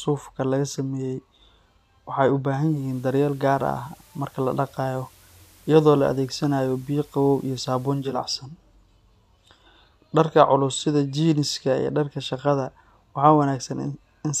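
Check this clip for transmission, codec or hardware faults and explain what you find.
One transmission fault is present: digital radio blending to analogue. From 2.48 s to 8.34 s, the receiver drops its digital stream and cross-fades to the FM analogue broadcast of the same station, then returns. Each blend takes about 474 ms. On FM, a faint hiss appears, roughly 30 dB below the speech. Loudness stays matched across both blends.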